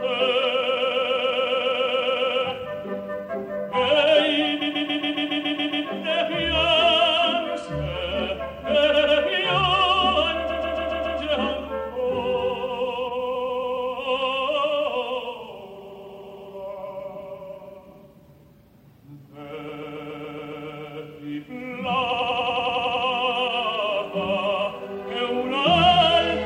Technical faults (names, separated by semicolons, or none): repeated frames